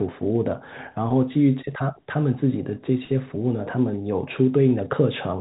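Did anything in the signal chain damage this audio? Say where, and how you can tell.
No, nothing in the signal chain damaged this audio.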